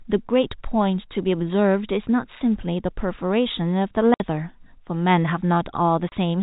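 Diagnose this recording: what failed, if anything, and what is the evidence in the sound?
The network stage failed: packet loss filled with silence. The speech drops out abruptly from 4.14 to 4.2 s, a 60 ms hole, and again from 6.09 to 6.12 s, a 30 ms hole, each with hard edges where the waveform stops and restarts. The second gap is half the length of the first, which points to 30 ms packets, with two lost in a row and then one. The receiver did not conceal the missing audio and played silence in its place. The G.711 telephone coding underneath carries the speech band-limited below 4 kHz.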